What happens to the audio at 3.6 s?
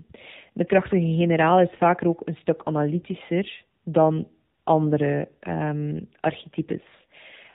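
At 3.6 s the speech carries AMR narrowband mobile codec damage. This is not a local event. The same coding runs through the whole clip. The sound is band-limited to the old telephone range, with nothing above 4 kHz. The voice is rebuilt from a vocal-tract model driven by a few pulses per 5 ms slice of each 20 ms frame. The buzzy, synthetic edge is plainly audible and points to a low bitrate near 7.4 kbps.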